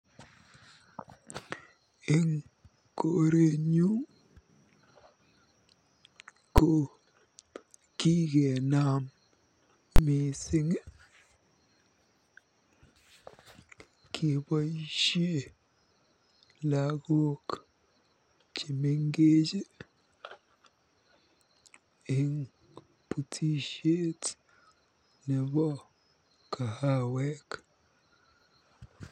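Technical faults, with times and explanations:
6.58 s, invalid numbers at full scale: a single hard bang lasting about 6 ms, which fits a 256-sample block. The output is pinned flat at one extreme value regardless of the speech level, unlike clipping.
9.96–9.99 s, invalid numbers at full scale: a 23 ms block, which fits 1024 samples, stuck at one extreme value. It is heard as a loud pop at each edge with silence between, not a crackle.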